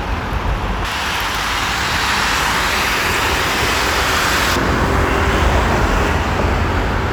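From 0.85 s to 4.56 s the sound turns thin, bright and hissy. This is pre-emphasis left on: the treble was lifted for recording or transmission, and the complementary cut that should restore the balance was never applied. Highs sit about 11 dB above the 1 kHz level by 10 kHz, a tilt that fits a J.17-style curve. On a spectrogram the upper bands glow noticeably denser across that span, and the waveform shows sharper, spikier transients.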